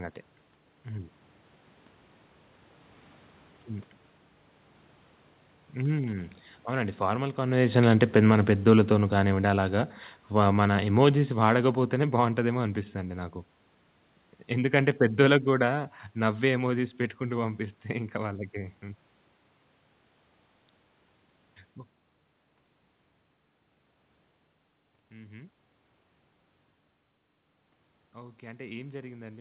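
From 5.78 s to 12.71 s the automatic gain falling is audible: the gain control judged the input too loud, or its background noise too strong, and eased its gain down by about 10 dB over those seven seconds. What separates this from the talker moving back, which also happens around 7.5 s, is that the room noise sinks along with the voice. A change in microphone distance would leave the background steady. All of this sits inside a band that stops at 4 kHz, consistent with a G.711 call path.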